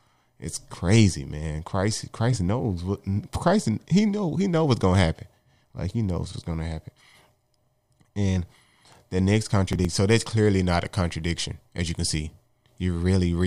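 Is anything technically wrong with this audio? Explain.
Yes, there's one fault. From 9.67 to 9.98 s, between "the next" and "that's clearly not a", you get processor overload crackle: the system misses a run of deadlines on roughly 5 ms buffers, skipping each one and leaving short hard-edged holes that sound like gritty tearing.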